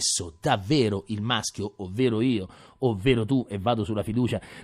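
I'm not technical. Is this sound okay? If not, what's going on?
No. From 2.0 s to the end, the speech sounds thin and hollow. This is channel delay (comb filtering). One side arrives a tiny bit late and cancels some high tones, starting around 7 kHz.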